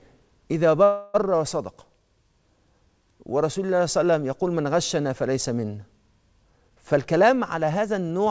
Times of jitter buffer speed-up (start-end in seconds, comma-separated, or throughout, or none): 6.45-8.27